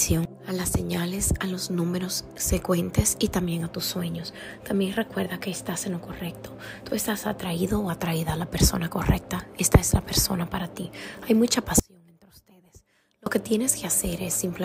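An audio dropout to a faint residue runs from 11.80 to 13.26 s. For nearly 1.5 s the sound cuts out abruptly, leaving only a faint leak roughly 30 dB below normal, likely because the wanted signal was lost while the downstream path stayed live.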